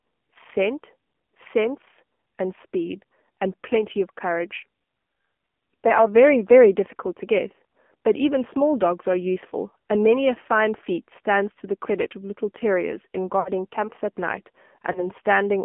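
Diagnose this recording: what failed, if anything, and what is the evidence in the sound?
The codec stage shows the AMR narrowband mobile codec throughout. Everything sits within 200 Hz to 3.4 kHz and carries a buzzy, synthetic grain, which fits the 7.4 kbps AMR-NB mode. A plain telephone band-limit would lose treble without adding this coded texture.

Lost AMR speech frames, a network-stage fault, occur at 13.40–13.50 s and 14.92–15.09 s. The decoder repeats the last good pitch and vocal-tract settings at falling gain, so the sound smears and sags instead of clicking or cutting hard like a buffer dropout. The first gap suggests about 60 ms lost, the second a single frame.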